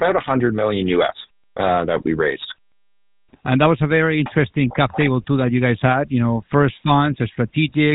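From start to finish the speech carries a plainly audible buzzy, gravelly roughness, and everything above about 4 kHz is missing, leaving it dull and narrow. This is the GSM full-rate codec at work, consistent with its 13 kbps mode. It models the vocal tract and excites that model with regularly spaced pulses, keeping only every third excitation sample. The coarse pulse train produces the grit, and the codec's band limit removes the top end.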